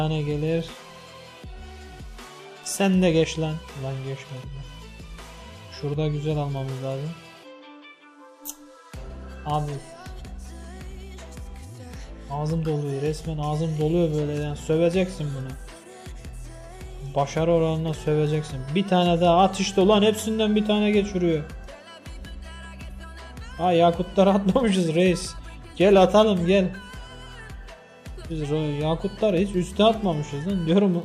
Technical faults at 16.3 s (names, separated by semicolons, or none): none